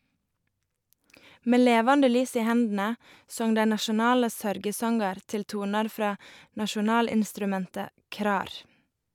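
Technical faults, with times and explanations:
No technical faults can be heard in this speech recording, and the signal comes across as intact and continuous.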